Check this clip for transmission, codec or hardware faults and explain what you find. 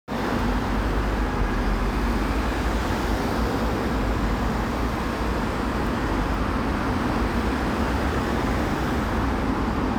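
No faults found here.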